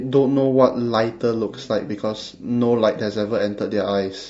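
From start to end the speech carries plainly audible low-delay AAC compression damage, likely from AAC-ELD as used on video calls. Its short transform frames, around 10 ms, cannot separate closely spaced pitch harmonics well, and at a rate that fits roughly 32 kbps there are too few bits to code them cleanly. The voice sounds rough and grainy, with noise filling the gaps between harmonics and a dulled, somewhat synthetic top band.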